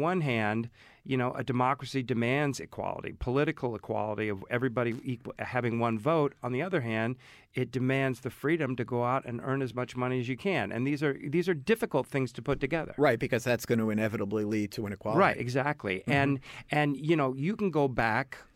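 At 4.91 to 5.03 s, loose connector crackle: a worn contact briefly makes and breaks, chopping the speech into irregular scratchy bursts, unlike the single clean tick of a digital click.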